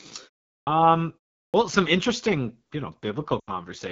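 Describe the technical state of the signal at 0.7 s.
At 0.7 s the sound has just come out of a clipped start after a pause. After roughly 0.4 s of silence, the output path dropped into a sleep state and needed time to wake, so about 39 ms of the onset, from 0.63 to 0.67 s, never reached the output. The sound therefore appears abruptly, missing its opening attack. A muted pause would fade back in before the sound and lose nothing, whereas this start is actually cut off.

The same moment also carries the AMR wideband (HD Voice) codec damage present throughout. The coarse rough, raspy texture points to one of the codec's lowest modes, likely around 8.85 kbit/s. At that rate the pulse-driven vocal tract model has too few bits to shape the excitation below 6.4 kHz cleanly, and the band from 6.4 to 7 kHz is filled with synthetic noise. Unlike the brief onset loss, this grit is steady and affects every part of the signal.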